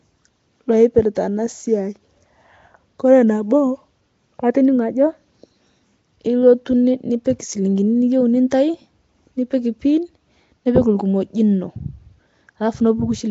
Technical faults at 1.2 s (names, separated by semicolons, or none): Nellymoser compression; pre-echo